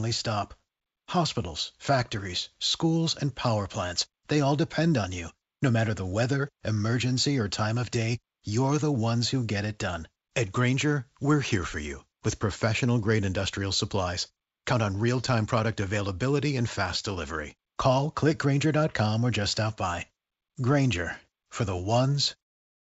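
The speech carries no technical faults, having passed through a call connection whose G.722 coding at 64 kbps leaves nothing above 8 kHz, and it ends with a smooth, editor-style fade out at about 22.5 s.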